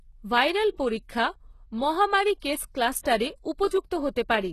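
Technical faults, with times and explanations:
Throughout: HE-AAC compression, likely at a very low bitrate near 16 kbps. Nothing is present above about 12.3 kHz, and the upper band is rebuilt by copying lower bands upward, so its harmonics fail to line up and s sounds come out gritty and metallic.
2.40 s and 3.03 s: pre-echo, after "ভাইরাল পরীক্ষা মহামারী" and again after "ভাইরাল পরীক্ষা মহামারী কেস". Each time, a short hiss runs for about 24 ms ahead of a sharp onset, because quantisation noise sized for the attack is spread back across the quiet start of the block, leaving the attack smeared.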